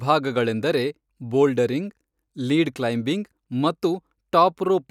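No technical faults can be heard anywhere in the speech.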